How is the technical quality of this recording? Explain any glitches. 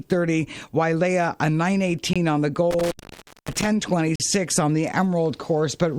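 Two kinds of fault interrupt the recording: short silent holes and one longer dropout.

At 2.13 to 2.16 s and again at 4.16 to 4.20 s, the sound stops dead for an instant with hard edges. Both are a gap between stream segments. The audio arrives in 2-second chunks, and where the time stamps of two chunks fail to meet, the player pads the space with silence, adding about 22 ms and then about 42 ms. Nothing is lost, only pushed later.

Between 2.71 and 3.67 s, the sound cuts out with crackle at the edges, leaving faint hiss in the hole for roughly 570 ms of open time. This is an intermittent contact: a loose cable or plug briefly breaking the signal path and crackling as it makes and breaks.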